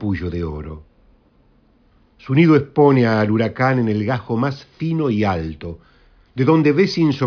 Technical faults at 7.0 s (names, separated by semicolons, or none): none